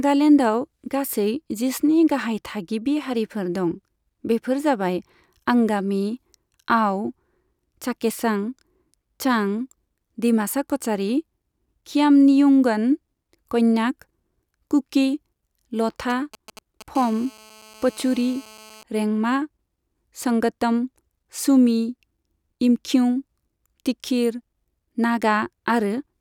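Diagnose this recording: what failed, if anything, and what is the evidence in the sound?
A nearby 2G phone is leaking into the analogue wiring. From 16.1 to 16.97 s there are GSM signalling bursts: galloping ticks and brief 217 Hz buzzes, roughly 20 dB under the speech.

Right after, from 16.98 to 18.83 s, comes GSM phone buzz: a steady, raspy 217 Hz tone with rich harmonics, about 25 dB down. The phone has gone into a call, and the circuit is rectifying its continuous radio pulses.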